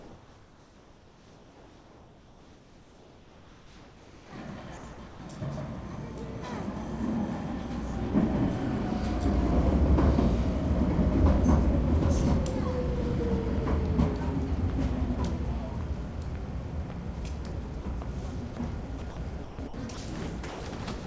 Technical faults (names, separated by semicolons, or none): comfort noise in place of the background; sound dropped by the voice detector; sound chopped by the voice detector